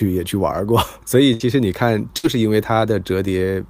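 A burst of packet loss hits this speech clip twice, at 1.33–1.43 s and 2.18–2.26 s. Each time the receiver stretches the last sound into a fading buzz or hiss (64 and 55 ms) while about 60 ms of audio goes missing before playback resumes.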